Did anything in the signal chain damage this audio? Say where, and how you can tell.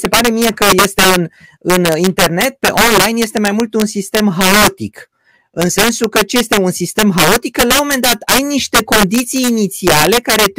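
Yes. Throughout the speech, the loudest moments break into violent, sharp cracks, far harsher than ordinary clipping, while quieter passages pass cleanly. That signature points to integer overflow at a gain or sample-format conversion stage: the signal was pushed roughly 6 dB past full scale, and instead of being limited, each peak over the ceiling wrapped around to the opposite extreme. Only a small share of samples, around 3 percent, cross that line, which is why the damage arrives as bursts on peaks.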